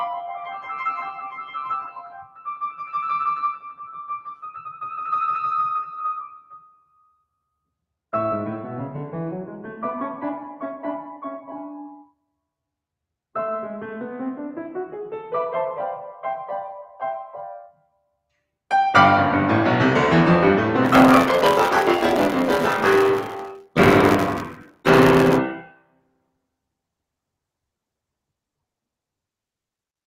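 All the way through this music, a speech-style noise suppressor has been left on. It keeps mistaking held tones and tails for noise, so the level pumps by around 10 dB: attacks punch through while sustains sag and thin out.

You can hear it bite hardest where there are sounds cut by the noise suppressor, dropping them by about 18 to 19 dB. This happens from 0.27 to 2.98 s, 3.52 to 4.88 s, 5.83 to 7.24 s and 17.66 to 18.08 s, with the sustained material sinking away.

From 20.84 to 25.38 s there's buffer tearing. The writer and the playback hardware have slipped out of step, so around two-fifths of each buffer replays audio from about 20 ms earlier. The joins give a robotic 86.1 Hz rattle, which fits a 512-sample buffer.

Inside that stretch the suppressor cuts in again at 23.61 to 23.76 s and 24.51 to 24.86 s, and once more at 25.59 to 26.29 s just after the tearing ends, each time dropping by about 19 dB.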